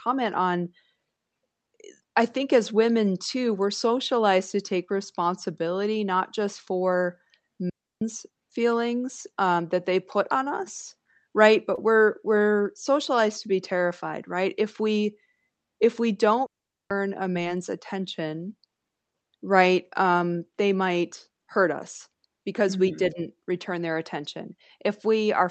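At 7.70 s the digital wireless link dropped too much data, so the receiver muted its output. Right after "responsibility not just for", the sound falls into a clean hole of near silence lasting about 0.32 s before "feelings um that they" resumes. The mute fades in and out very quickly, and there is no burst of noise on either side.

At 11.75 to 11.79 s a short concealed packet loss occurs. Roughly 20 ms of audio arrived too late for the decoder, and the receiver extended the preceding sound to cover the gap before blending back into the real signal. Between "put on us right" and "we're we're socialized to" this is heard as a brief smear or wobble rather than silence.

A second digital wireless dropout starts at 16.46 s, just after "if we". This time the receiver mutes for about 0.44 s, leaving the same kind of abrupt, noise-free gap.

At 17.33 to 17.37 s another short concealed packet loss leaves a similar momentary smear, where about 20 ms of missing audio was filled by extending the sound before it. 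Throughout the clip the Opus call path limits the audio bandwidth to 8 kHz.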